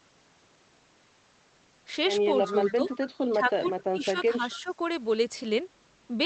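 From 2.46 to 2.96 s a faint delayed copy of the speech runs under the talker, trailing by about 260 ms and sitting roughly 15 dB below it. This is an echo leak, likely from a loudspeaker at one end whose echo canceller let part of the microphone pickup through. It differs from room reverberation because the copy is a distinct repeat at a fixed lag, not a smooth decaying tail.

Overlapping and then following that leak, the talker's own level dips in five places: 2.49 to 2.57 s by about 5 dB, 2.75 to 2.91 s by about 10 dB, 3.32 to 3.74 s by about 10 dB, 3.90 to 4.43 s by as much as 20 dB, and 4.59 to 4.73 s by about 5 dB. This is speech suppressed in double talk. The canceller likely could not separate near speech from far echo and attenuated both. Unlike packet loss, the sound is turned down rather than cut to silence or replaced. The Opus call path limits the upper range to about 8 kHz throughout.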